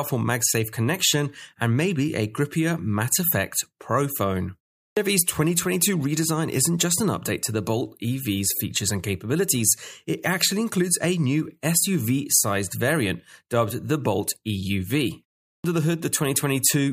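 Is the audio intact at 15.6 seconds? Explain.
No. After a 0.36 s pause, the output device had gone idle and was still waking when sound resumed, producing a clipped start after a pause from 15.53 to 15.64 s. The first 112 ms are swallowed, so the speech bursts abruptly out of silence.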